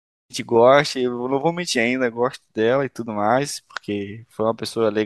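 No technical faults can be heard anywhere in this recording.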